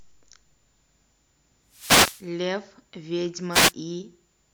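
At 1.69 to 2.27 s and again at 3.51 to 3.73 s, wireless microphone noise hits break through the speech: brief swishes of static as the analogue FM radio link fades and receiver hiss surges. Unlike a digital dropout, the sound is masked by rising noise rather than cut to silence.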